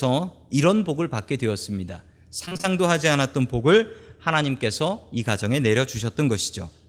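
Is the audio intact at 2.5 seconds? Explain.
No. From 2.45 to 2.65 s there is repeated packet loss (robotic sound): five short gaps, the longest 23 ms, each patched by extending the preceding sound, so about half the span is filled in. Unlike a single dropout, it sounds choppy, with pieces missing.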